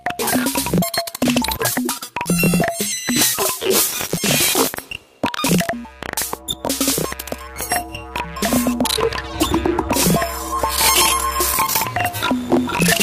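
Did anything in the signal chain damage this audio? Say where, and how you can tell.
No, nothing in the chain damaged this recording.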